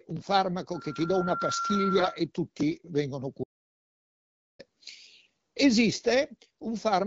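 From 1.96 to 2.07 s the speech turns briefly hoarse and gargly, roughly holding its pitch and level. These are AMR bit errors: a few percent of the weakly protected bits in the wideband frames arrived flipped, misplacing excitation pulses and skewing fine pitch, gain and spectral values.

At 3.44 s, just after "tutti vengono", the sound cuts to total silence, with no room tone, until 4.59 s, a 1.16 s audio dropout to silence. The input was likely lost briefly while zeros kept being written, so that stretch of speech is gone.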